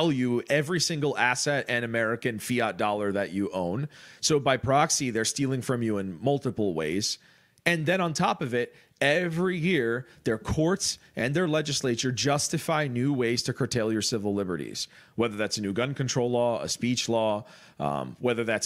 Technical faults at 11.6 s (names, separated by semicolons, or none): video or display buzz